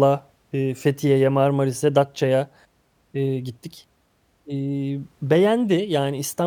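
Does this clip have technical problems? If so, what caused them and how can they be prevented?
No, no technical faults here.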